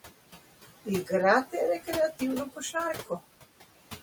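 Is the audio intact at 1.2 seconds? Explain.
No. Across the whole clip, including 1.2 s, the background dips between phrases, the room noise drawn down by about 17 dB. These are noise suppressor artifacts from frame-by-frame band attenuation.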